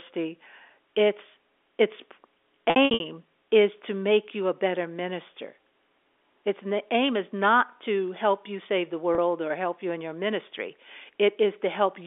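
Packet loss with pitch repetition at 2.7 to 3.0 s, just before "is to make you", where 180 ms went missing in gaps across 300 ms (longest 60 ms), and at 9.15 to 9.18 s, between "help you save the" and "or help you in", a single 30 ms gap. The receiver bridged each gap by repeating the last pitch period of the sound before it. All of this is heard through the narrow 300 to 3.5 kHz band of the G.711 telephone coding.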